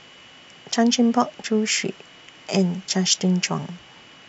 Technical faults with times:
none

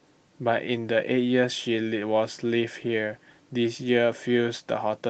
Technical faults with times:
none

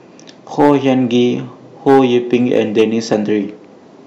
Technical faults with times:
0.60-0.90 hard clipping
1.88-3.14 hard clipping

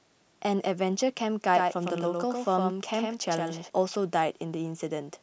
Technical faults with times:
1.54-3.70 doubled audio track

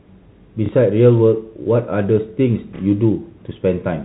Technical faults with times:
0.66-0.69 packet loss with last packet repeated
2.76-2.79 packet loss with last packet repeated

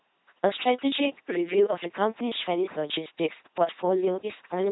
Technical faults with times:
0.00-4.72 LPC-10 vocoder

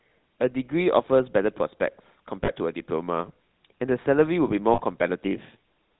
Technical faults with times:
0.00-6.00 GSM full-rate codec
2.44-2.51 lost GSM frames
4.74-4.81 lost GSM frames

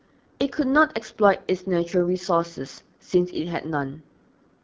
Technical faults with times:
0.00-4.64 AMR wideband (HD Voice) codec

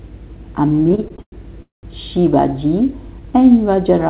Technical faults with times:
0.68-1.34 repeated stalls (stutter)
1.62-1.85 call audio freeze

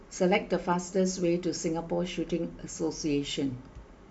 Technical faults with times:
none

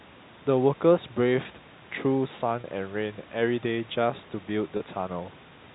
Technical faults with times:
2.61-2.64 packet loss with pitch repetition
4.77-4.80 packet loss with pitch repetition

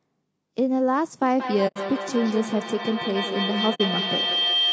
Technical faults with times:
0.00-4.73 low-delay AAC compression
1.22-4.73 feedback howl
1.67-1.78 AAC frame loss with muting
3.74-3.81 AAC frame loss with muting

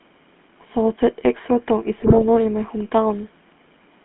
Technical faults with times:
0.00-4.05 GSM full-rate codec
1.98-2.23 GSM bit errors

